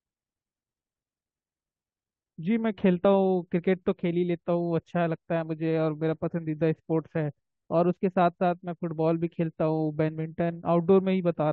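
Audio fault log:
3.04 s, damaged data in a compressed stream: a brief blip, roughly 12 ms long, cuts across the speech. Bytes in this stretch of the compressed stream were corrupted, so the decoder misread or rejected the frames there, lost its place in the bitstream and had to search for the next valid frame header. During that gap the output is disrupted, heard as a short blip before clean decoding resumes.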